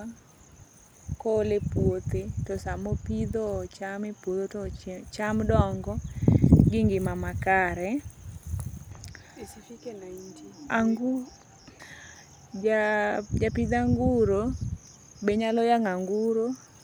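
Listening to this speech recording, nothing technically amiss stood out at any point.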